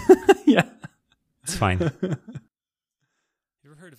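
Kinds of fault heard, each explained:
One channel inverted: from 2.48 s the speech drops by about 32 dB without going fully silent, unlike a dropout, likely from one reversed channel cancelling the other in mono.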